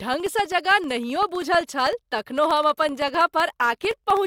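Speech with periodic USB or driver dropouts: tiny silent gaps, under a millisecond each, recur every 64 ms from 0.07 to 4.17 s, heard as regular ticks.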